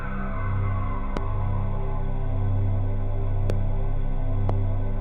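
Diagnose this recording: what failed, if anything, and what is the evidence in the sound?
A loud pop fault sits in the analogue wiring stage, likely a connector, switch or static discharge injecting a voltage step into the line. Three separate single pops appear, at 1.17 to 1.19 s, 3.50 to 3.52 s and 4.49 to 4.52 s, each about 20 ms long and peaking around 10 dB above the programme. The downstream circuitry rounds each step into a brief thump, and the underlying audio continues uninterrupted beneath each one.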